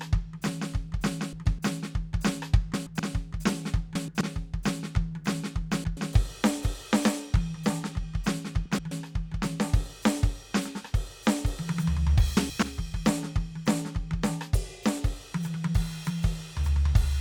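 Frames out of order occur in this music at 1.33–1.59 s, 2.74–3.00 s, 3.95–4.21 s, 5.71–5.97 s, 8.66–8.92 s and 12.37–12.63 s. In each, two adjacent blocks of about 128 ms, which fits runs of four frames each, were decoded in swapped order, so roughly a quarter-second plays with its halves exchanged. It comes across as a brief garbled flutter, and no time goes missing.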